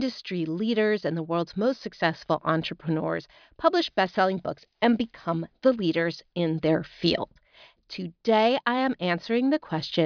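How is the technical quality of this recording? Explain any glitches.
Nothing stood out as a technical problem on listening to this recording.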